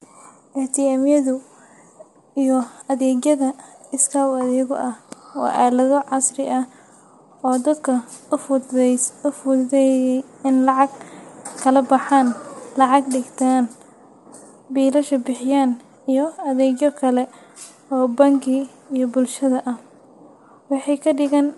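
Across the whole of this speech recording the voice has a plainly audible coded quality, with a processed, rough texture and a top end that stops dead at about 11.6 kHz, leaving nothing above it. This is likely low-delay AAC compression (AAC-ELD), the video-call codec that works in very short frames. Those frames separate vocal harmonics poorly and spend bits inefficiently, and the damage here fits a bitrate around 32 kbps.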